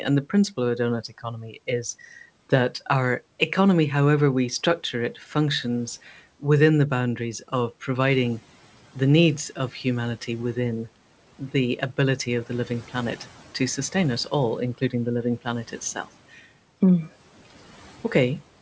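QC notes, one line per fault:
8.11–8.40 s: noise suppressor catching up. The room noise jumps by about 11 dB at around 8 s. The suppressor's noise estimate trails that jump, so the noise passes through with less reduction for 290 ms. It then sinks by about 10 dB once the estimate adapts.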